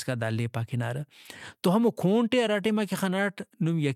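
Nothing stands out as a technical fault anywhere in this short bit of speech, so there's nothing to point to on the timeline.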